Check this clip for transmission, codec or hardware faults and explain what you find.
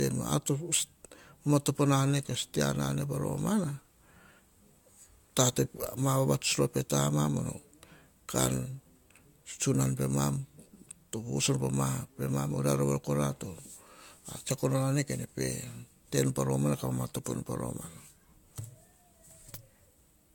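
One fault runs through the whole recording: generation loss. From start to finish the speech has a swirly, hollow quality, with smeared consonant attacks. Nothing is audible above about 17 kHz, a ceiling that fits AAC-LC at around 96 kbit/s. The cause is likely repeated lossy re-encoding, roughly three passes. Each pass requantises the audio on a shifted frame grid, so noise and spectral holes accumulate beyond what one encode at that bitrate would leave.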